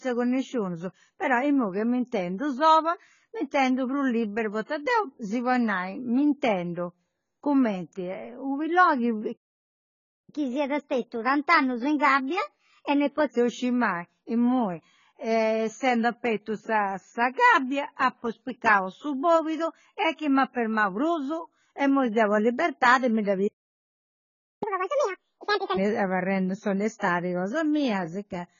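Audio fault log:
throughout: likely AAC compression. Heavy codec damage, consistent with AAC-LC at a bitrate around 16 kbps, leaves nothing above 7 kHz. The speech sounds dull and smeared, with a warbling or fizzy texture. Unlike simple low-pass filtering, it also leaves holes in the spectrum or noise substituted into bands.
9.32–10.30 s and 23.47–24.63 s, playback stall: the speech halts in mid-flow and goes silent for about 0.95 s, then about 1.14 s after "sa libertadi mi dda". The likely cause is the player running out of data or being blocked. These gaps are longer than a brief dropout.
10.30–13.30 s, catch-up at higher speed: after the first stall, the audio plays at 1.15 times normal speed, about two semitones sharp, to win back lost time. The speed-up begins on "bessiri mai imui". Tempo and pitch rise together, which distinguishes this from a pure pitch shift.
24.63–25.77 s, catch-up at higher speed: after the second stall, the backlog plays at double speed, roughly ten semitones higher. 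This makes a brief chipmunk-like rush that is more extreme than the first catch-up, before normal playback resumes.
26.99–27.02 s, pre-echo: a 28 ms hiss just before "cosa mia". It appears because the codec spreads quantisation noise across the whole block, so noise sized for the attack fills the quiet just ahead of it. The hiss is tied to that onset, not continuous.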